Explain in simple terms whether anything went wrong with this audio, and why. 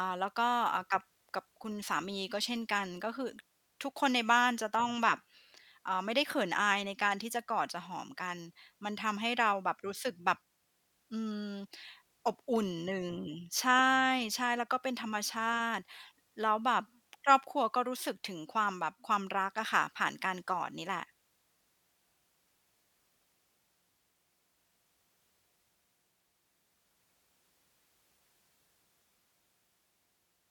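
The recording most likely suffered dropped samples: twice, a couple of individual sample values went missing from the stream, a gap far shorter than a millisecond. With those values gone, the waveform leaps straight from one point to a later one instead of moving smoothly. That sudden jump is heard as a single sharp click in the speech, once at 12.92 seconds and again at 20.48 seconds. No actual sound is lost.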